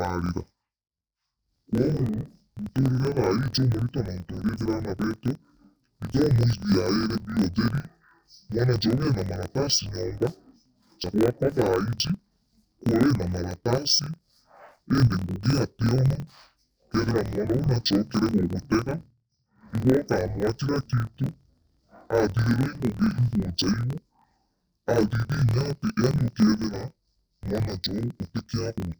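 Throughout the speech, the voice sounds an octave low, doubled and choppy, with a rough flutter at about 42 Hz. This is interleaved audio read as planar: each 24 ms block's alternating channel samples were split in half, so each half plays at half speed.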